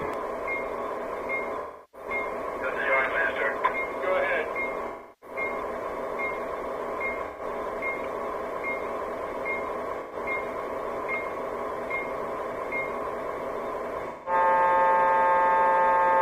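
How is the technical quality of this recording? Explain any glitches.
The recording has repeated dropouts from AAC frame loss with concealment, at 1.59–2.08 s, 4.87–5.36 s, 7.26–7.42 s, 10.00–10.16 s and 14.09–14.33 s. The decoder patches each gap from the last good spectrum, so you hear brief smeared, noisy, phasey stretches. The two longer ones, roughly a third of a second of lost data each, sag before the sound recovers.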